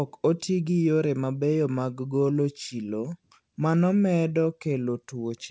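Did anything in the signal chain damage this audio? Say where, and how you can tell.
No, the speech came through a call path working as it should, and the band ending at 8 kHz with nothing above it points to a wideband codec such as G.722 at 64 kbps rather than to any damage.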